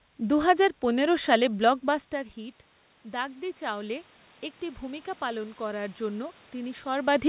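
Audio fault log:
1.85 to 4.12 s and 4.79 to 7.24 s, automatic gain rising: each time the speech drops by about 15 dB at the microphone, the gain control slowly adds about 4 dB, so voice and room noise swell together over two seconds or more.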